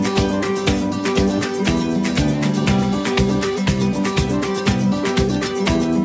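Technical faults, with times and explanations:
No technical faults are audible; the sound has passed through normal call microphone processing, with the lowest bass trimmed by its high-pass filter and nothing present above 8 kHz.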